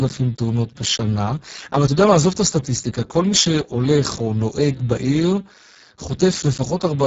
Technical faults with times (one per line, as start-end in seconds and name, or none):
0.00-7.06 Speex codec